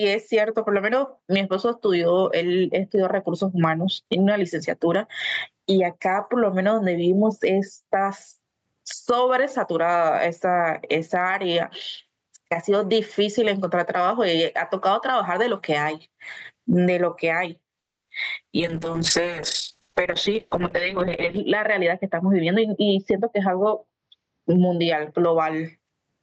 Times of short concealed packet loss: 18.05

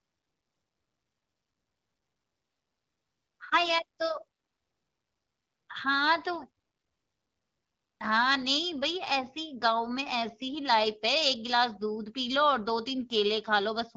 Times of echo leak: none

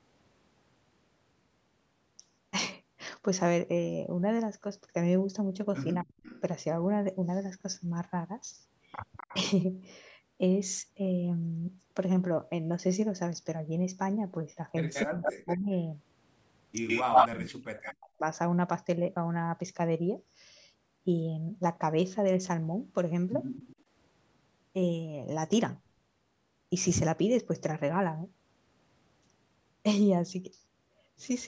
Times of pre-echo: none

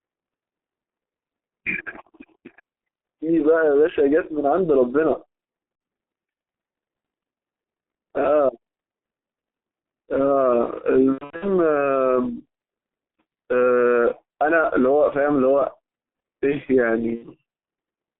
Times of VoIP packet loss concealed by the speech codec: 5.75-5.81, 11.12-11.45, 17.15-17.25

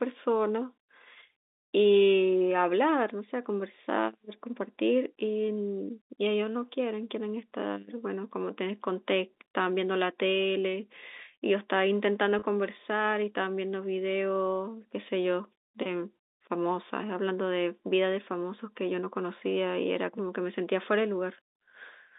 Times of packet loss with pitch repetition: 12.39-12.42

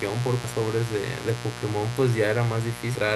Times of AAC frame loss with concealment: none

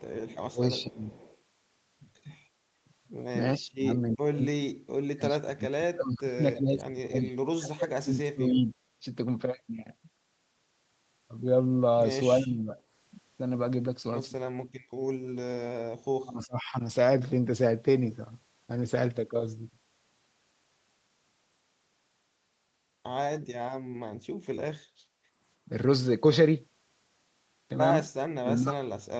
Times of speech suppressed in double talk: 0.38-1.17, 3.59-9.04, 12.40-12.76, 16.16-16.75, 28.39-28.99

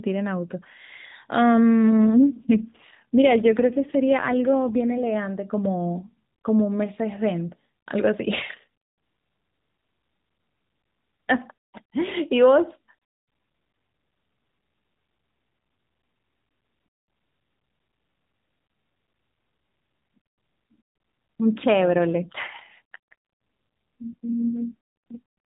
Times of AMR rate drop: 2.06-5.16, 21.98-25.21

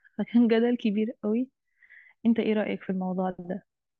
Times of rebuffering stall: none

